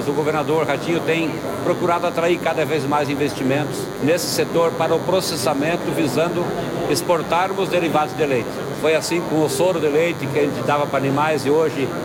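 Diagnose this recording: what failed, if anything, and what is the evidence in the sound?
DECT cordless phone buzz runs through the whole recording, a steady, thin buzz at 100 Hz with a dense series of harmonics, sitting roughly 15 dB below the wanted sound. The failure is in the analogue wiring: a DECT handset or base nearby transmits a short radio burst every 10 ms, and the audio circuit rectifies each burst, turning the 100 Hz burst rate into an audible, harmonic-rich tone.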